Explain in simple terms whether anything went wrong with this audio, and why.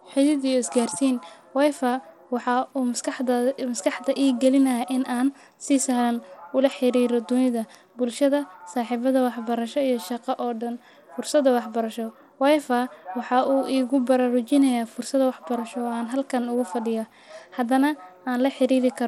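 Across the whole recording the speech carries the marks of Bluetooth SBC compression, and the damage is plainly audible. Nothing is left above about 16.8 kHz, so the airy top of the sound is gone, and the upper treble that remains flickers and sounds gritty. This is likely the result of sending audio over a Bluetooth link with too little data: the codec starves its highest frequency bands and roughly rounds off the rest.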